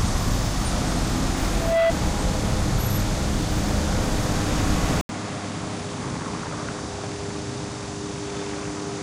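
Loudspeaker feedback squeal runs from 1.52 to 1.93 s. The microphone picks up its own loudspeaker, and at 664 Hz the loop gain passes one. A pure tone swells over about a third of a second and ends up a few decibels louder than the surrounding sound.

At 5.01 s the input switches to a poorer device, which likely means the system changed to another microphone or a headset profile. After about 80 ms of silence, the sound stays dull to the end. Nothing is left above 10.5 kHz, the level drops by about 10 dB, and a faint new noise floor sits well beneath it.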